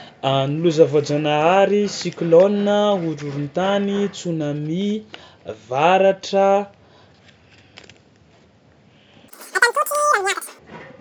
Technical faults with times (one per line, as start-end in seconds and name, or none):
9.28-10.59 wrong sample rate